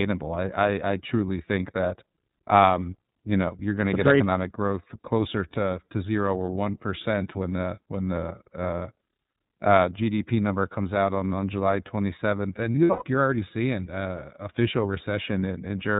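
The whole clip runs through the iLBC codec. Everything above 4 kHz is gone, and the speech sounds plainly rough and a bit synthetic, which fits 30 ms frames at about 13 kbps. From 12.73 to 13.03 s, just before "you're already seeing uh", there are lost iLBC frames. The decoder fills the scattered gaps, the longest around a tenth of a second, with a repeated buzzy pitch cycle.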